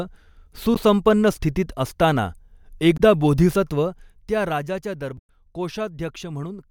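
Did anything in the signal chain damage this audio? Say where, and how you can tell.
Yes. The damage sits at the codec stage, as damaged data in a compressed stream. Three brief glitches break the speech at 0.75 to 0.78 s, 2.94 to 3.00 s, and 5.17 to 5.29 s, the last just after "त्या राजाच्या". Each is a short blip. Corrupt bytes made the decoder misread frames. It lost sync and jumped to the next valid frame header. The gentle level moves in the clip are ordinary fader changes.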